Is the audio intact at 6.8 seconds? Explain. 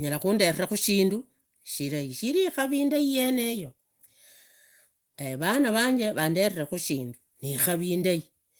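Yes, the speech at 6.8 seconds is intact, with no fault at that moment, only the light, fullband Opus voice compression that runs through the clip.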